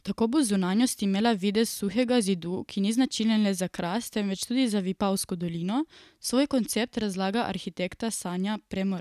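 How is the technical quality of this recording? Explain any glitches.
The technical quality of this recording is good, and there are no glitches to explain.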